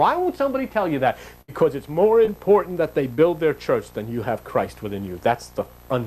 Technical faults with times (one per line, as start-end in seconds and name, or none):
1.41-1.62 burst of packet loss
2.25-2.29 short concealed packet loss
3.15-3.20 short concealed packet loss